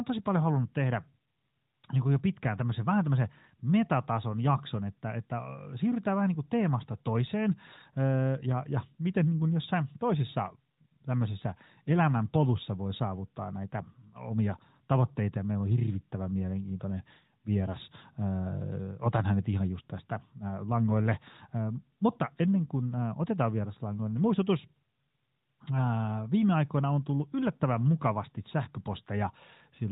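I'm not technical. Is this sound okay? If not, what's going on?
Yes, there is nothing wrong with this speech recording.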